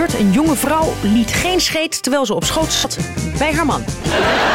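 At 2.77 s a Bluetooth stutter breaks in and lasts until 2.85 s. The wireless link lost or delayed its audio packets. With nothing new to play, the receiver looped the last short slice it held. That gives a brief buzzing, machine-gun repeat of about 70 ms, which fits roughly three lost packets. When fresh data arrives, the sound jumps ahead. The missing stretch is simply gone, as though playback had carried on underneath.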